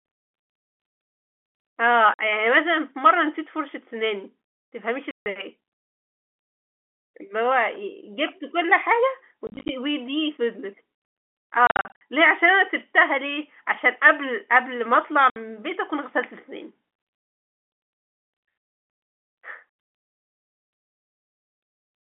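Hard-edged holes chop the speech at 2.14 s (50 ms), 5.11 s (150 ms), 9.47 to 9.69 s (scattered dropouts), 11.67 to 12.01 s (scattered, longest 50 ms) and 15.3 s (60 ms). This is packet loss filled with silence on a G.711 telephone line. Gap lengths fit 10 ms packets.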